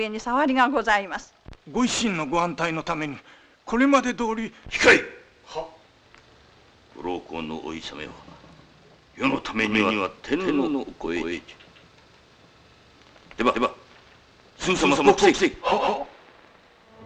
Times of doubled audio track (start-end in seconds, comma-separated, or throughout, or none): 9.66-17.06